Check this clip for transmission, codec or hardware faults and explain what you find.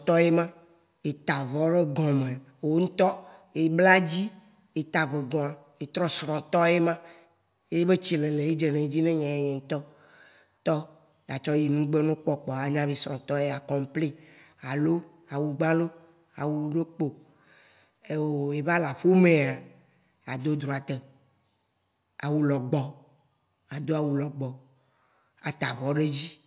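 Nothing wrong can be heard in the signal: the speech stays continuous and steady in level and tone throughout.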